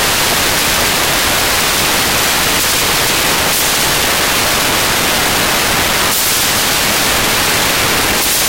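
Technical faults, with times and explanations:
Throughout: samples built from the wrong bytes. The reader assembles each sample's bytes incorrectly, through a one-byte offset, swapped byte order or a wrong alignment, so the rapidly changing low bits become the large part of each value, replacing the sound with loud, harsh broadband noise.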